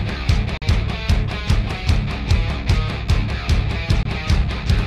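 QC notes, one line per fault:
0.57–0.64 s and 4.03–4.06 s, Bluetooth dropout: the sound cuts to silence for about 43 ms and then 21 ms, then resumes further along as if it had kept playing. This is likely from late packets being discarded, with the gaps matching two frames and one frame of about 21 ms.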